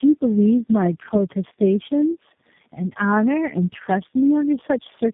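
Speech with tandem speech coding throughout: repeated codec re-encoding leaves it rough, muffled and warbly, and a spectrogram shows nothing above 3.7 kHz.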